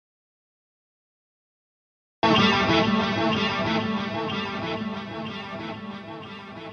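From the start to 2.23 s there is an audio dropout to silence: silence with no room tone, already under way when the clip begins, before the sound cuts in abruptly. The input was likely lost through a disconnected device, failed link or mute.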